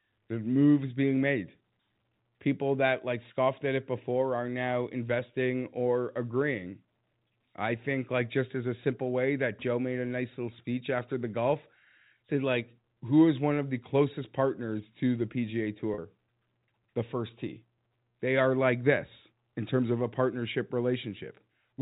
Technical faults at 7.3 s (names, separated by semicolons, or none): packet loss with pitch repetition